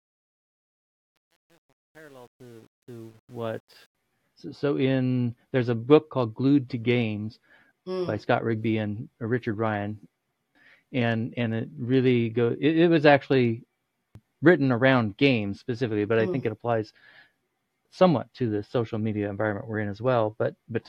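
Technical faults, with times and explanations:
0.00–3.95 s, truncation distortion on a fade: the fade-in begins gritty, worst until 3.45 s. Undithered gain rounds the quiet waveform to coarse steps, which fits 9-bit resolution. Unlike dropouts, the grit eases as the level rises.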